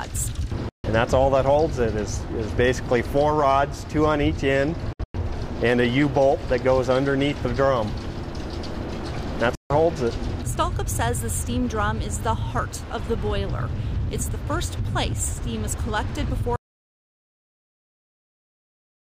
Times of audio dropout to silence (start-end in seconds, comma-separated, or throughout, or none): 16.56-19.02